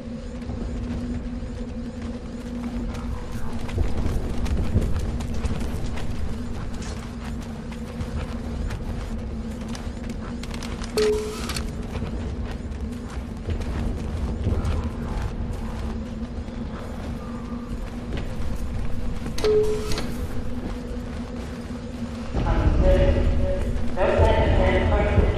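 No technical faults are audible.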